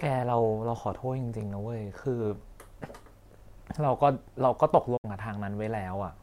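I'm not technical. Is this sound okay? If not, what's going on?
No. Around 4.97 to 5.05 seconds there is a digital broadcast dropout: the receiver briefly lost the incoming signal and muted itself until it recovered. The speech quickly fades out, leaving a short silent gap, and whatever was said then is gone.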